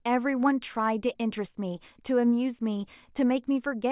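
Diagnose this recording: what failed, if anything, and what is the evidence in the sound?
No fault found in this recording.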